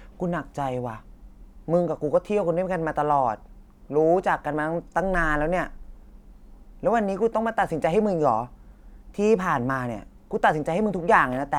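No technical faults can be heard anywhere in this speech.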